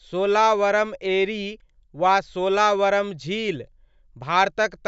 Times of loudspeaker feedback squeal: none

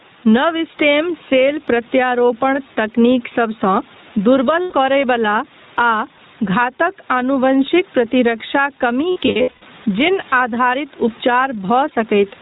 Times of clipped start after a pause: none

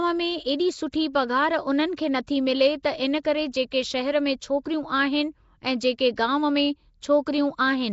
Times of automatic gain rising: none

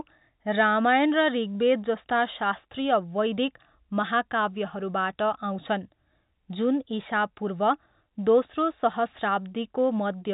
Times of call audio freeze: none

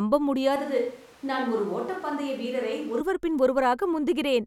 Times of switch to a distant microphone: 0.56-3.00

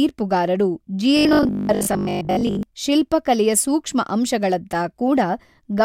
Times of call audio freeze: none

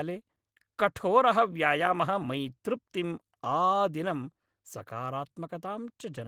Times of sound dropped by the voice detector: none

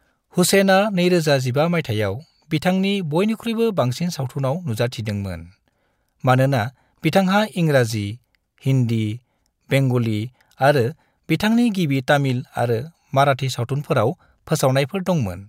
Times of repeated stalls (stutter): none

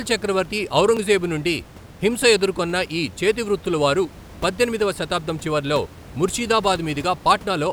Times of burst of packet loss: none

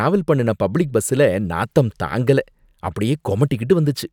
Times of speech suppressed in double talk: none

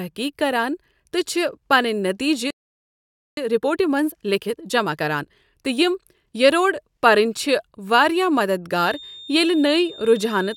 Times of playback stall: 2.50-3.37

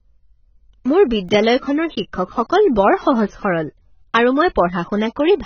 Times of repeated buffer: 1.29

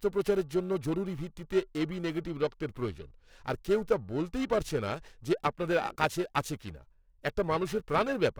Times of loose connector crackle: none

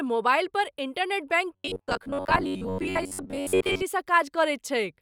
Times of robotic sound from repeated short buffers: 1.54-3.83

